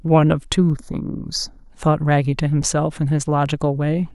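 From 0.70 s to 1.70 s the speech turns hollow and phasey. This is channel delay, heard as comb filtering. One channel runs late by a tiny amount, around a fifth of a millisecond. When the two are summed to mono, the shared content cancels at evenly spaced frequencies. The first notch falls near 3 kHz, with more above it at regular steps. That cuts into the upper presence range and dulls the sound for this stretch.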